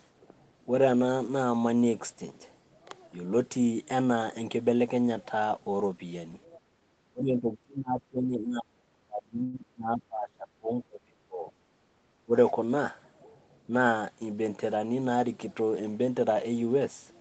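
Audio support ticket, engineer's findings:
Speech suppressed in double talk at 6.57–6.67 s, 7.08–11.57 s and 12.25–12.32 s. Speech level dips about 20 dB, and up to about 35 dB across roughly 4 s. Likely echo canceller attenuating near-end speech during far-end activity.

Call audio freeze at 9.43–9.56 s. 102 ms of concealment fill: the last sound is stretched and fades, then playback resumes with nothing lost. Adds 102 ms of delay. Likely late packets draining the jitter buffer.

Background gated by the echo canceller at 11.85–11.95 s. Room sound drops about 7 dB for roughly 100 ms while the loudspeaker plays, then recovers when suppression releases.

Jitter buffer speed-up at 13.19–13.93 s. Playback runs at 112% speed at unchanged pitch, with about 100 ms trimmed in pitch-period slices to shrink an overfilled buffer. Audibly hurried.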